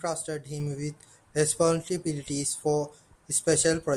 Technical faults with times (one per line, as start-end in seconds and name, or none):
0.60-3.97 sudden gain jump